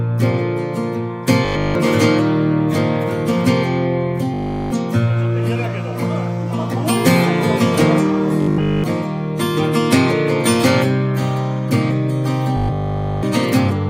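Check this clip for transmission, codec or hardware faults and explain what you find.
There is one recurring fault, robotic sound from repeated short buffers, at 1.45–1.75 s, 4.34–4.72 s, 8.42–8.84 s and 12.57–13.23 s. In each span the audio becomes a rigid, metallic 50 Hz buzz, likely because a single 20 ms buffer is looped in place of nearly all of the incoming audio.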